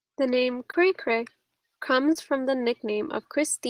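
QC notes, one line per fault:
0.71–0.75 s and 2.13–2.17 s, short concealed packet loss: each time about 20 ms of speech failed to reach the decoder in time, so the receiver extended the preceding sound and blended back, leaving a brief smear or wobble, the second just before "from the".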